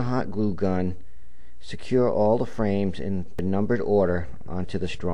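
At 3.39 s there is a CD skip: a knock or a disc flaw threw the laser onto a different turn of the spiral, so the player muted for a few milliseconds and resumed from another point in the recording. It is heard as a small tick followed by a sudden jump in the sound. On a waveform this shows as a brief flat gap with abrupt, mismatched edges; a spectrogram shows a thin vertical broadband line where the content changes discontinuously.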